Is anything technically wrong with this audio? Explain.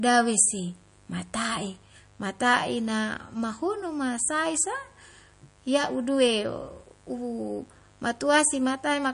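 Yes, two problems run through the whole speech clip.

Mains buzz is present from start to finish. Something in the recording chain, such as a dimmer, a rectifier or an unshielded cable, is letting sharp switching spikes from the 50 Hz supply leak into the signal. Because those spikes are abrupt, they carry a ladder of harmonics stretching up into the kilohertz range. The result is a steady, raspy buzz sitting well below the speech, roughly 35 dB down.

MP3 compression is the likely cause of the second fault, which is also continuous. When the encoder runs short of bits, it discards weaker frequency components. Those components then flicker on and off from one frame to the next. The damage is plainly audible: nothing survives above 10.5 kHz, s sounds turn swirly and metallic, and consonant attacks smear. The amount of loss fits a low bitrate of around 40 kbps.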